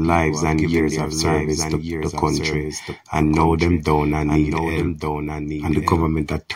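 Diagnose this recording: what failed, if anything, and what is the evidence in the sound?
Doubled audio track throughout: a dry, full-band copy, about 5 dB quieter, trails roughly one second behind, likely a second, slower capture path at the driver stage.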